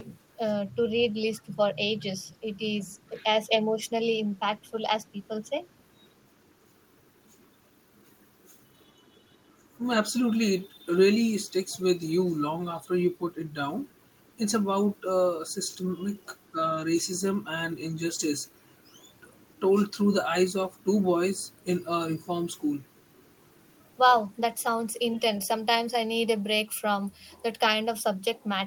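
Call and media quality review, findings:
Speech suppressed in double talk, likely echo canceller treating near-end speech as loudspeaker echo during overlap and attenuating both. The voice dips or chops at 0.37–0.43, 0.75–3.93, 4.39–4.78, 5.13–5.55 and 8.74–9.37 s, mostly by about 10 dB and deepest near 20 dB in the last.

Echo leak at 5.74–5.79 s, likely residual loudspeaker pickup passing the echo canceller on a speakerphone end. A very faint, brief delayed copy of the voice, lagging by 477 ms, sits roughly 40 dB below the speech.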